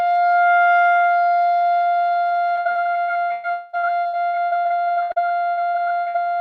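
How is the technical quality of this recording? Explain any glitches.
The technical quality is poor for much of the clip. The music passes through a call codec whose upper limit near 12 kHz fits Opus at around 48 kbps. Two network faults damage the second half.

From 2.59 s to 6.16 s there is repeated packet loss, which gives a robotic sound. Audio packets kept failing to arrive in time, about 25 separate gaps, the longest 116 ms. Each time, the receiver stretched the last sound it had to cover the hole. The next hole came soon after, so roughly a third of this stretch is patched rather than real. The music turns choppy, with pieces missing throughout.

Between 3.51 s and 3.75 s a single hole of about 220 ms stands out from the shorter ones. It is most likely a long network dropout, where nothing arrived for that stretch. The receiver kept extending the last sound for the whole gap, so there is no silence. 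The music turns into a fading continuation of the last sound for under a quarter of a second. It resumes further on with that part gone.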